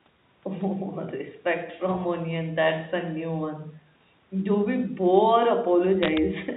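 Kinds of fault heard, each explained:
Bit errors on a digital phone line: A short burst of sharp ticks and crackle rides on top of the speech from about 6.03 to 6.18 s, while the speech beneath stays intact. Single bits in the G.711 A-law telephone stream were flipped, at a rate of a few in every thousand. Each error spoils one sample, and when it hits the sign or a high-order bit of the logarithmic code, that sample jumps far off and clicks.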